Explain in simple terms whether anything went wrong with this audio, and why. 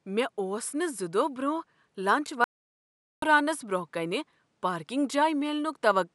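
There's a playback stall from 2.44 to 3.22 s: the speech cuts out for about 0.78 s, then carries on, likely because the player ran short of data.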